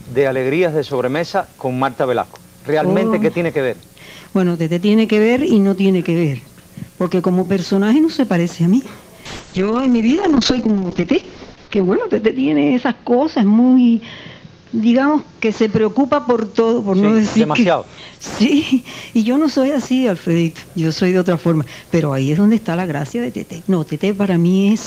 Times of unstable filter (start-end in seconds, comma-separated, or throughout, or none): none